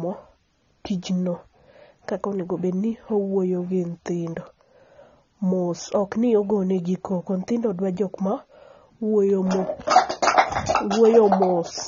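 From start to finish the speech has no content above 7 kHz and carries plainly audible codec damage, so it sounds dull and smeared. The likely cause is AAC compression, specifically AAC-LC, with the damage level fitting a bitrate around 24 kbps. At that rate the encoder cannot afford the upper spectrum, so it lowers its cut-off and quantises the remaining frequency lines coarsely against its hearing model, discarding detail throughout the clip.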